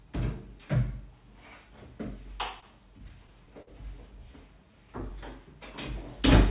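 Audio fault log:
2.57–3.70 s, repeated stalls (stutter): seven brief halts, the longest about 49 ms, filled by stretching the preceding sound, roughly 111 ms in total, around a tenth of this span. Late packets kept emptying the buffer. On a spectrogram, short smeared repeats of the prior spectrum interrupt the flow.
4.26–5.11 s, jitter buffer slow-down: the sound drags to 96% speed at unchanged pitch, gaining 43 ms, as repeated pitch periods rebuild the buffer's reserve. The waveform shows near-identical cycles in a row, and the spectrogram stretches horizontally without shifting in frequency.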